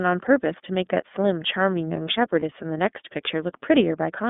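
Throughout, the speech carries the iLBC codec's narrowband sound: nothing below about 200 Hz or above 3.6 kHz, with a plainly audible rough, synthetic edge. That fits the 13.33 kbps mode with 30 ms frames. Unlike a plain low-pass filter, the damage lies in the coded excitation, not only the missing highs.

From 2.40 to 2.43 s, lost iLBC frames leave a gap of about 30 ms, one frame's worth. The decoder fills it by repeating the last pitch cycle with added noise, giving a brief held, buzzy vowel. Unlike a dropout or a looped buffer, the speech recovers clean almost immediately.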